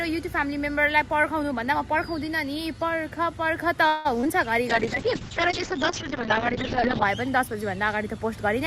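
From 3.87 to 4.07 s the sound stalls for about 175 ms, continuing as a fading buzz or hiss before resuming exactly where it left off. This call audio freeze is likely a late-packet stall that drained the jitter buffer. Unlike packet loss, nothing is missing: a gap is inserted and the timeline shifts later.

Short concealed packet loss follows at 4.21 to 4.25 s and 4.25 to 4.27 s. Each event drops about 20 ms of real audio, patched by a brief extrapolated smear that blends back in. The second also pulls the delay back by roughly 15 ms. Here content is actually lost, not merely delayed.

From 4.70 to 7.11 s a call bitrate drop takes the encoder from 64 kbps to 7 kbps for about 2.3 s. Bandwidth narrows from 20 kHz to 8 kHz, so the sound turns muffled and watery. It is a sustained change in quality, not a momentary glitch like the events before it.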